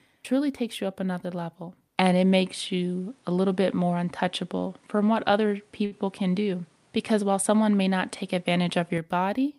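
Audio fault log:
1.98–8.98 s, input switched to a poorer device: after "you up another level" the sound turns duller, with nothing above 11.4 kHz. Level shifts by about 5 dB. A new noise floor sits well below the signal. There is no gap at the switch. A change of microphone is the likely cause.
5.85–5.93 s, short stall from a late packet: a packet arrived late and the jitter buffer ran dry. The last sound is held for 59 ms, then playback resumes where it stopped. Nothing is lost, but the stretch adds 59 ms of delay.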